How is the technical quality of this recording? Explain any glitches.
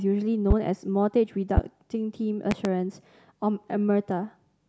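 Four loud pops break through the speech, each one sharp and well above the level of the talking, by around 15 dB at the peak. The first comes at 0.51 to 0.54 s, the second at 1.57 to 1.61 s, and at 2.51 to 2.68 s two pops land in quick succession. Each is a brief thump while the speech carries on underneath. The likely cause is a sudden electrical pulse, from a connector, a switch or static, added to the signal and briefly shaped by the circuits that follow.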